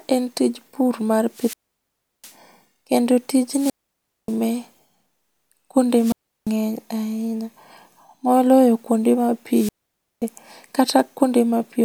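Wireless microphone squelch dropouts hit at 1.30 s (after "en tij pur mar"), 3.48, 5.91 and 9.50 s (after "moloyo kuonde ma"). The radio signal fades. Hiss rises, then the receiver mutes for 0.34 to 0.71 s.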